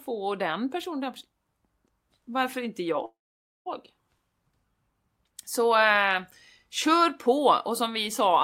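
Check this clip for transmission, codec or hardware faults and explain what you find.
One fault is present: a call audio freeze at 3.05 to 3.68 s, right after "varför inte". Packets were likely held up in transit, so the jitter buffer ran dry. The receiver carried the last sound on as a short fading buzz, then about 0.52 s of silence. The speech resumes exactly where it stopped, with nothing missing, but runs about 0.6 s later from then on.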